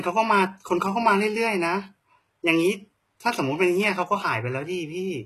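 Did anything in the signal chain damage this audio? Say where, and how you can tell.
Yes. The damage sits at the codec stage and runs through the whole speech clip: the treble sounds synthetic and is likely from HE-AAC compression at a very low bitrate, which fits about 16 kbps. Sibilants come out gritty and metallic. That points to spectral band replication, where upper bands are copied from lower ones rather than coded, so harmonics do not line up across the crossover. Content stops dead at 12.3 kHz. A plain low-pass filter would leave dull but clean highs rather than bright, rough ones.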